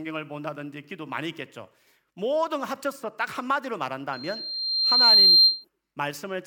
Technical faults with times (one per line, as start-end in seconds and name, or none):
4.13-5.65 loudspeaker feedback squeal